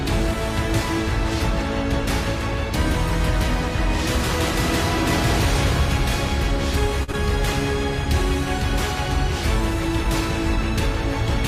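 Right around the seven-second mark the audio hits two network hiccups back to back. First, from 7.03 to 7.10 s, there's a short stall from a late packet. The packet wasn't there in time, the jitter buffer ran dry, and the receiver held the last bit of sound for 45 ms until it showed up. Nothing is actually lost, but that sound drags on a touch too long with a faint buzzy or dipped quality, and everything after it now runs 45 ms later than before. Then, just after, at 7.12 to 7.15 s, there's a short concealed packet loss. About 20 ms of audio never made it to the decoder, and the receiver papered over it with 13 ms of synthesized continuation before blending back into the real signal. That comes across as a quick smear or wobble, and anything very brief falling in that gap can simply disappear. Together, the two fall within 7.0 to 7.2 s.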